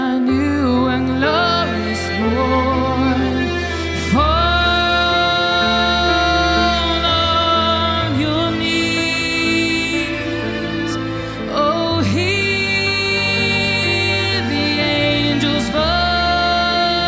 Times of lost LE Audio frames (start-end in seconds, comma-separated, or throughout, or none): none